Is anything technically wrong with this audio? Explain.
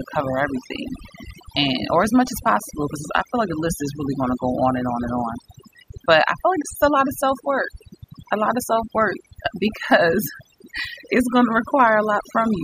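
Yes. The speech has overdone noise removal running through the whole clip. A noise reducer set far too aggressively is pulling individual frequency bands down hard whenever their level sits close to its estimate of the background noise. The quieter components of the speech fall below that threshold and are removed along with the noise. The pauses drop lower and break up into twinkling, warbling specks.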